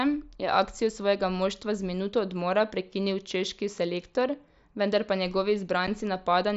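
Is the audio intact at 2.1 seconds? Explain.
Yes, at 2.1 seconds the speech is intact, with no fault heard at that moment.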